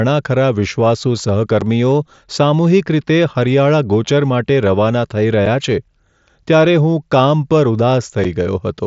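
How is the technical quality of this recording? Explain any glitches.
The speech is cut by three brief dropouts, carried over what sounds like a wideband mSBC headset link with a faint grain on louder syllables. At 1.61 s, 5.46 s and 8.24 s the voice drops out for about 7.5 ms with hard edges. This is unconcealed Bluetooth headset packet loss: each gap fits a single lost voice packet between headset and phone, replaced by silence or an idle pattern rather than smoothed over.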